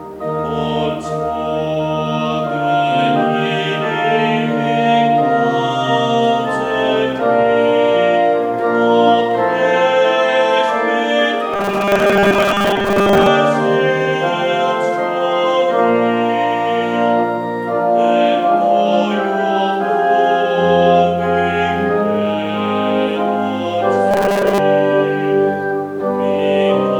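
From 11.53 to 13.28 s, and again from 24.11 to 24.59 s, the sound turns to a rigid, metallic buzz at 200 Hz. This is robotic sound from repeated short buffers. A 5 ms slice is likely being looped while most of the real audio is skipped.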